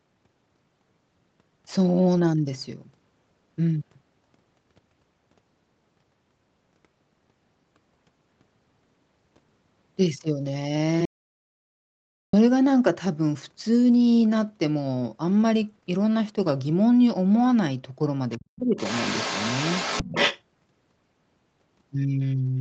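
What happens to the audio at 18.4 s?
A faint second voice slips in from 18.31 to 18.45 s, very low, around 30 dB under the main talker. This is the other side's voice leaking through: the far end was likely played on a loudspeaker and the echo canceller left a scrap of it in the microphone signal.

Right on top of that, from 18.37 to 18.76 s, the talker's speech dips deeply and breaks up for roughly a third of a second in total. That is speech suppressed in double talk: with both sides sounding together, the echo canceller likely failed to tell its own talker from the echo and turned everything down.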